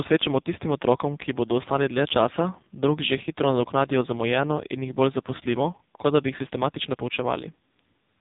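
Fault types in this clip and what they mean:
AMR narrowband mobile codec: throughout, the speech is rebuilt from a vocal-tract model driven by a sparse pulse train, and nothing passes above 3.8 kHz. The damage is heavy, with a buzzy, synthetic, muffled voice that fits a low mode near 5.9 kbps.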